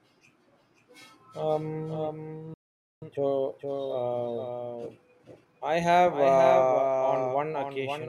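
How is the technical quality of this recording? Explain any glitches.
The technical quality is poor, with three faults.

A doubled audio track runs through the whole speech clip. A second full-band copy trails the original by about half a second, around 5 dB quieter. It is likely a second capture through a slower path. The copy has no room colour or decay, so it sounds like a hard echo.

A playback stall occurs from 2.54 to 3.02 s. The sound cuts out mid-flow for about 0.48 s, then resumes. The likely cause is the player running short of data or its thread being blocked. The output simply goes silent until it recovers.

Time-compressed catch-up follows from 3.02 to 6.02 s. The player works off its backlog by cutting out small pieces and cross-fading the joins. The speech runs at 1.15 times normal speed. Pitch stays normal, but the delivery sounds hurried.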